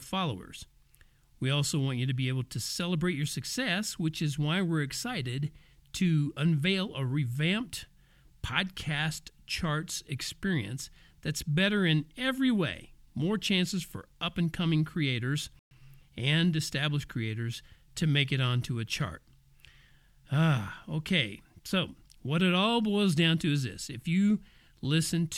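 A speech clip with a playback stall at 15.59 s: after "up and coming creators" the audio goes silent for 120 ms, then resumes at "and established creators to". The likely cause is the player running out of data or its thread being blocked.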